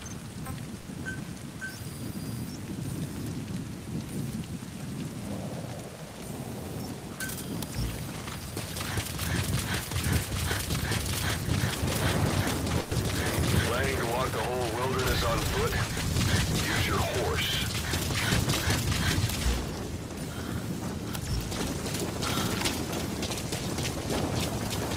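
The audio has two bursts of packet loss, at 0.79 to 0.88 s and 12.79 to 12.94 s. The receiver bridges about 60 ms and 120 ms by extending and fading the preceding sound, then resumes later, so that stretch of audio is missing.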